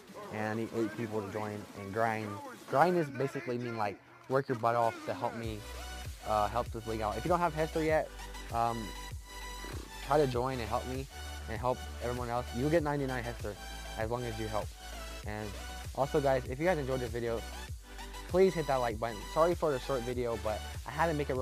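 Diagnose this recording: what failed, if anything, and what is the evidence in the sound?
Nothing failed: no stage of the chain, from analogue wiring through conversion, buffering, processing and playback, leaves any audible mark on this recording.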